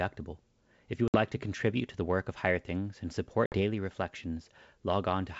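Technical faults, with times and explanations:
1.08 to 1.17 s and 3.46 to 3.59 s, packet loss on an ADPCM call: a hard-edged 60 ms silence, then slightly distorted speech as the decoder's predictor and step size resynchronise after a few lost packets.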